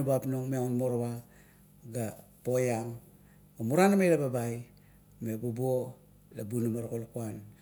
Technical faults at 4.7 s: none

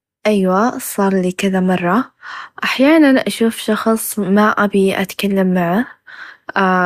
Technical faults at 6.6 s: none

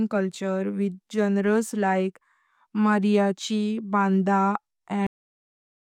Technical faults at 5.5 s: cut-off end

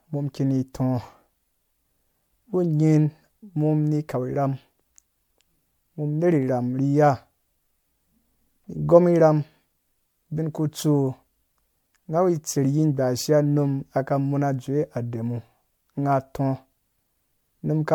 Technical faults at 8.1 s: generation loss

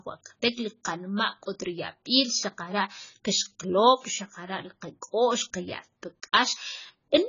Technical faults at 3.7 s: AAC compression

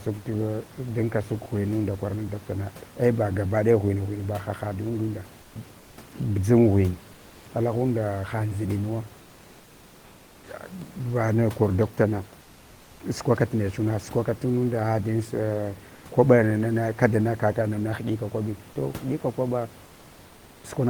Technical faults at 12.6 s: comfort noise in place of the background

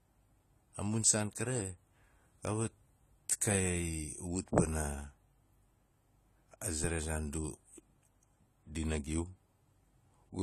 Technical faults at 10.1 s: AAC compression

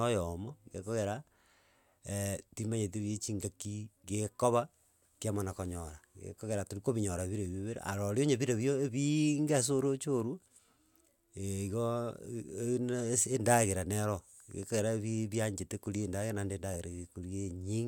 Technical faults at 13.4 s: none

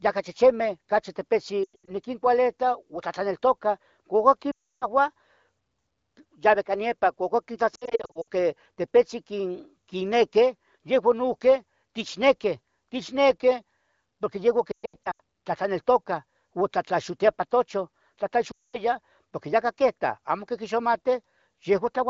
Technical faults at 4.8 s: lost AMR speech frames

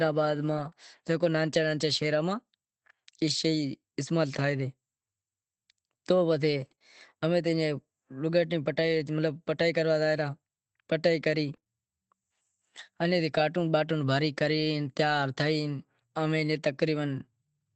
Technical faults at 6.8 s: lost packet rebuilt from error correction; short concealed packet loss

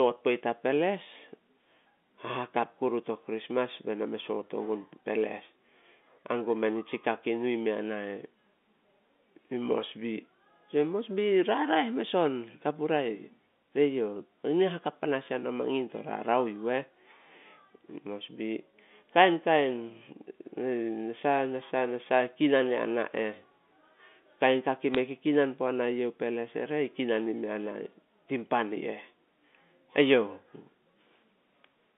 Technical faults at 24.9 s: bit errors on a digital phone line

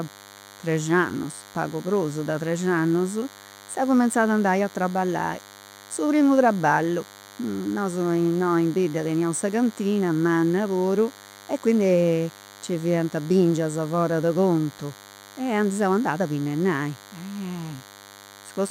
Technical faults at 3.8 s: DECT cordless phone buzz

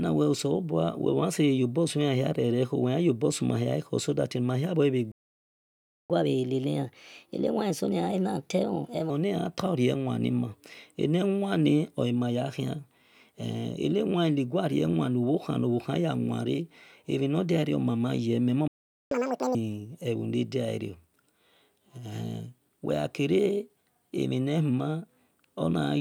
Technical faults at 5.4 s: playback stall

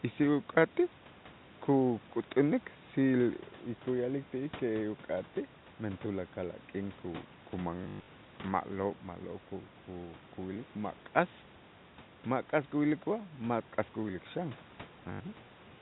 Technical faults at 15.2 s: packet loss with last packet repeated

